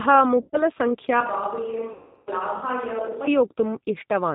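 It's a short speech clip, and the whole thing has been through the G.729 codec at 8 kbit/s (the A variant, by the sound of it). That's why nothing comes through above 4 kHz, and the voice has that slightly rough, synthetic edge you get when speech is rebuilt from a filter, a pitch predictor and a handful of pulses per frame. There are two spells of VoIP packet loss concealed by the speech codec. The first, from 0.41 to 0.63 s, is roughly 120 ms of missing audio that the decoder papers over by stretching the last sound into a fading buzzy tone or coloured noise. The second, from 1.93 to 2.30 s, is about 340 ms, long enough that the extrapolated sound fades and the voice stays weak or distorted as it recovers. Overlapping that, from 1.20 to 3.27 s the sound suddenly turns roomy and hollow, with less bass, and drops to around 5 dB quieter with some faint room noise underneath. That's likely a switch to a distant microphone, with the close mic cutting out and then coming back abruptly.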